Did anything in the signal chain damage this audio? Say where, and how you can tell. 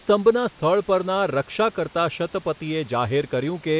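No, the speech arrives through a G.711 A-law call path at 64 kbps that leaves nothing above 4 kHz, as that narrowband codec is designed to do, with the room's own background noise sitting about 28 dB below the speech, and no stage of the chain has damaged the signal.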